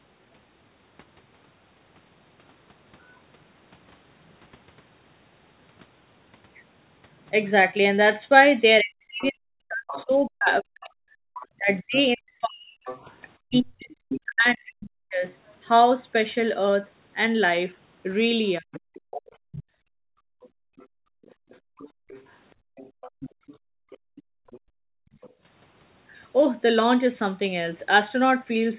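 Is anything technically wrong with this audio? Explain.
Yes, the speech has three problems from echo cancellation during a two-way call.

Speech suppressed in double talk runs from 8.81 to 15.24 s, with a brief return from 18.59 to 18.82 s. The talker's level sinks as deep as about 40 dB, likely because the echo canceller confused the talker with loudspeaker echo. The waveform shows collapsing envelopes, and the spectrogram shows speech harmonics thinning or vanishing.

The other side's voice leaks through from 9.21 to 10.05 s and from 11.39 to 14.21 s at about 15 dB below the talker. It returns from 18.75 to 25.3 s at about 20 dB below. A second voice comes through, likely residual loudspeaker echo the canceller missed. The spectrogram shows weaker, overlapping harmonic stripes.

Background gated by the echo canceller spans 19.22 to 25.42 s. Room sound drops as far as about 40 dB for a few seconds in total while the far end plays, then returns. 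The waveform's noise floor falls to near-silence, and the spectrogram shows blank gaps between events.

All of this sits in band-limited audio with nothing above 4 kHz, which fits a narrowband telephone codec.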